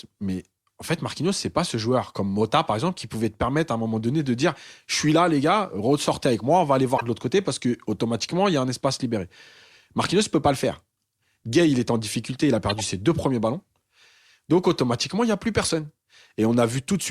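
Corrupt frame decoded: damaged compressed frames were played as if valid, misplacing energy in frequency. Chirpy bursts follow "moi on va aller" at 6.90–7.02 s and "en difficulté il a" at 12.69–12.85 s, with a shorter one after "il n'y a plus" at 15.62–15.69 s.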